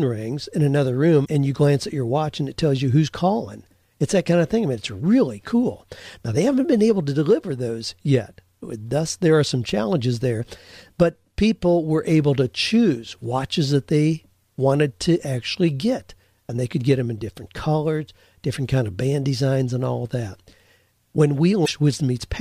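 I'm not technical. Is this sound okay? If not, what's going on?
No. There is damaged data in a compressed stream. At 1.22 to 1.28 s, after "rings in another" and before "and you glance at", a short glitch cuts in. Another hits at 21.62 to 21.69 s. Corrupted bytes made the player lose its place briefly.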